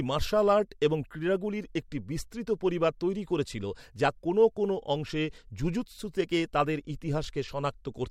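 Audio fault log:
Nothing to log here, as the speech comes through without a single fault to point at.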